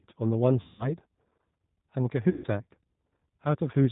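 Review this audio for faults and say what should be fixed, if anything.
The speech carries G.729 codec damage from start to finish, and it is plainly audible. Nothing above 4 kHz survives, and the voice has a rough, slightly synthetic texture, which fits G.729A at 8 kbit/s. The decoder rebuilds each 10 ms frame from a vocal-tract filter, a pitch predictor and a handful of pulses rather than the actual waveform. To prevent it, negotiate a wideband codec such as G.722 or Opus on this link instead of G.729.

VoIP packet loss concealed by the speech codec occurs twice, from 0.61 to 0.91 s and from 2.30 to 2.47 s, covering about 180 ms and 140 ms of lost audio. Those gaps fit runs of nine and seven lost packets. In each gap the decoder repeats its last pitch and filter state at falling gain, so the speech smears into a buzzy tone or coloured noise that fades. Because every frame depends on the one before, the voice stays weak briefly after packets resume. 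To prevent it, reduce network loss with QoS prioritisation and a larger jitter buffer, or enable forward error correction.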